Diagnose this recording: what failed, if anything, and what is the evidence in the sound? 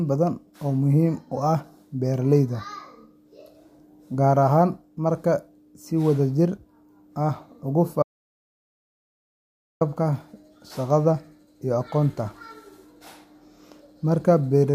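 An audio dropout to silence cuts the speech off mid-flow at 8.03 s, and it resumes abruptly at 9.81 s, so about 1.78 s of material is simply gone. The gap holds silence with no room tone. On a waveform it is a flat line; on a spectrogram, a completely empty band across every frequency. The failure most likely sits upstream at the input stage, a lost device link or mute, while the recorder kept writing silence.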